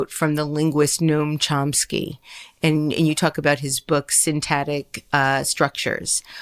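No technical faults can be heard anywhere in the recording.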